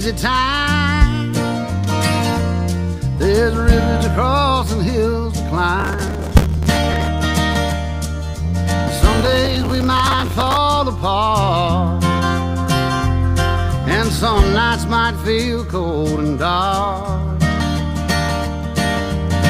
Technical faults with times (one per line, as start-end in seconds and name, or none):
5.80-7.08 processor overload crackle
9.19-10.57 processor overload crackle